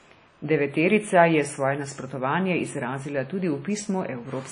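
Throughout the speech, washy ringing and signal-following hiss, with nothing above 10.1 kHz, point to likely WMA compression near 32 kbps; low-pass filtering alone would dull without breathing noise.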